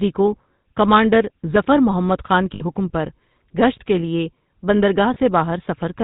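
The speech has been carried through the GSM full-rate codec, whose character fits the original 13 kbps GSM scheme. It models the vocal tract and excites it with a regular pulse train built from only every third excitation sample, and it discards everything above 4 kHz. The result is plainly audible throughout: a buzzy, gravelly roughness over the voice with no top end. On top of that come lost GSM frames, where damaged frames were replaced by repeating the last good frame's settings. From 2.54 to 2.62 s the sound hangs in a rough, metallic ring for about 76 ms, which fits three consecutive 20 ms frames going missing. A shorter ring of the same kind, about 34 ms long, sits at 5.14 to 5.17 s, consistent with a single lost frame.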